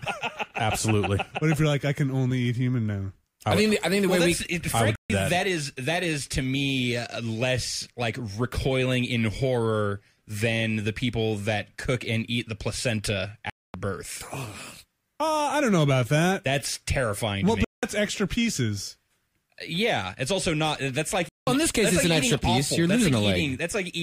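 The sound cuts to silence at 4.96 to 5.10 s, 13.50 to 13.74 s, 17.65 to 17.83 s and 21.29 to 21.47 s. After each gap the audio resumes further along, as if it had kept playing. This is likely a Bluetooth dropout, with packets arriving too late and being discarded.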